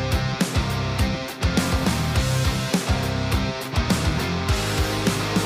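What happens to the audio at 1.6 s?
Nothing goes wrong at 1.6 s; the audio plays through that moment intact.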